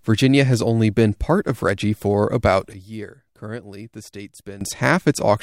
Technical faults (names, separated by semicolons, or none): sudden gain jump